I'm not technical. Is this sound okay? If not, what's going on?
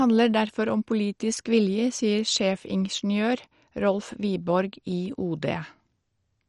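No. The whole speech sounds dull and gurgly, with nothing above 11.3 kHz. That's MP2 compression, likely squeezed too hard.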